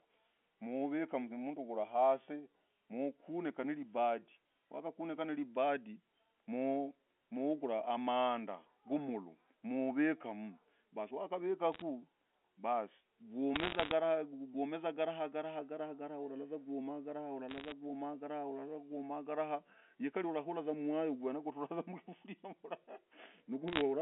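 Bit errors on a digital phone line crackle through at 11.72–11.82, 13.56–13.91, 17.49–17.72 and 23.68–23.82 s. Flipped bits in the A-law stream corrupt single samples, and with roughly one error per hundred bits or fewer you hear brief bursts of sharp ticks riding over the narrowband phone sound.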